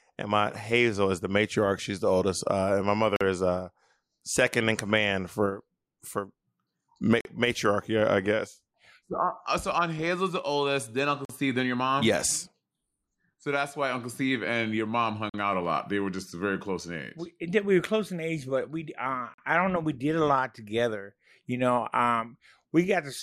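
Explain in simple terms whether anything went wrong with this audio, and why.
The audio was handled in 4-second chunks, and each join left a gap between chunks: about 44 milliseconds of dead air. The speech itself isn't missing; it just stops and restarts abruptly. You can hear these short holes at 3.16, 7.21, 11.25, 15.30 and 19.34 seconds, for example right before "matriarchy I guess" and between "and your mom" and "out a lot". The regular four-second spacing gives it a stuttering rhythm.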